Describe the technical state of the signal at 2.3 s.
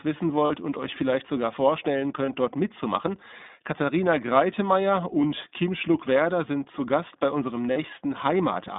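At 2.3 s the signal carries a single lost iLBC frame, from 2.26 to 2.30 s. It falls between "euch vielleicht sogar vorstellen" and "dort mitzumachen". About 20 ms of audio never arrived. The decoder filled the hole by repeating the last pitch cycle blended with noise. The result is a brief held, slightly buzzy vowel. Each iLBC frame decodes on its own, so clean speech returns immediately after.

Underneath, the whole clip is coded with the iLBC codec. The passband runs only from about 200 Hz to 3.7 kHz, so everything above is gone. The sound fits 20 ms frames at roughly 15 kbps. Each frame's excitation is coded without relying on the previous one. The codec damage is plainly audible. The speech sounds clear but rough and somewhat synthetic.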